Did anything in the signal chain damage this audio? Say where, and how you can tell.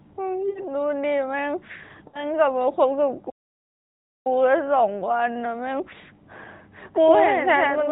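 Yes. In the network stage, lost AMR speech frames cause two short breaks, at 0.50 to 0.61 s and 2.08 to 2.26 s. Each gap lasts about 60 ms, which fits three 20 ms frames going missing. The decoder fills each gap by stretching the last good sound with falling gain, so it smears and fades rather than cutting to dead silence. The narrowband AMR codec is heard through both gaps, with nothing above 4 kHz. That smeared, decaying fill is what tells these apart from the stall.

At playback, a playback stall runs from 3.29 to 4.27 s, a break of about 0.95 s. The sound stops abruptly in mid-flow and the output is true silence, with no concealment smear or fade. That clean, hard gap separates it from frame loss. The likely cause is the player starving for data or its thread being blocked before it resumed.

From 6.96 s to the end, a doubled audio track appears. A second full-band copy trails the original by about a tenth of a second, roughly 5 dB quieter. 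The copy comes in suddenly and has no decay or room colour, which rules out an acoustic echo or reverb. The likely cause is a duplicate capture path or an editing overlap mixing the same audio in twice.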